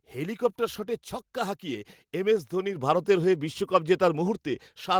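At 2.76 s the microphone volume stepped up: software boosted the input gain about 7 dB at once, so speech and background jump louder together.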